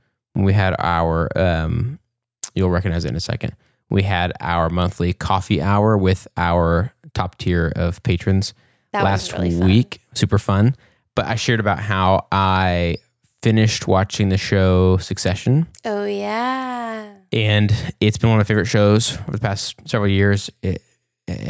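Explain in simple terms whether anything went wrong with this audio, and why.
Nothing went wrong here: the speech comes through steady and intact, with no dropouts, glitches or other technical problems anywhere along the way.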